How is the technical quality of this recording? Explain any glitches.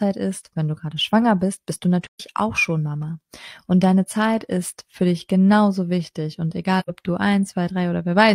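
Two dropouts mar it, both AAC frame loss with muting. At 2.04 to 2.21 s the sound fades into a hole about 128 ms long, which fits roughly three lost frames; at 6.79 to 6.90 s there's a shorter 85 ms gap, likely two frames. The decoder zeroes the missing spectrum, and the overlapping windows ease the level down and back up, so each gap is a soft-edged silence rather than an abrupt cut.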